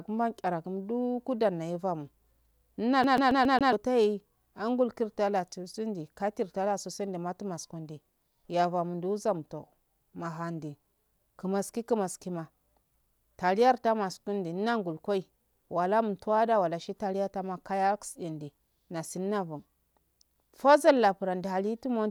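From 3.04 to 3.73 s the speech sticks like a CD stuck on one turn: a 138 ms slice repeats five times with brief mutes, evenly spaced, unlike a random buffer dropout.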